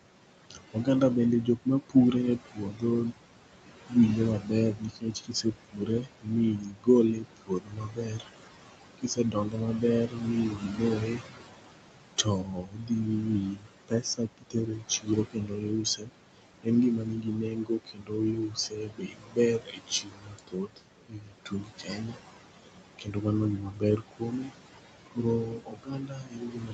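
Speech, with noise suppressor artifacts throughout. The suppressor pulls the background down by about 21 dB between phrases, so the noise sinks between the words and rises under them. Unlike plain room noise, this residue pumps with the speech instead of staying steady. Speech cut by the noise suppressor occurs at 0.5–0.87, 1.45–3.14, 3.89–8.28, 8.98–22.21 and 22.99–24.52 s, and from 25.11 s to the end. Soft consonants and word endings drop by up to about 22 dB, adding up to many seconds, and sound swallowed rather than clipped or masked by noise.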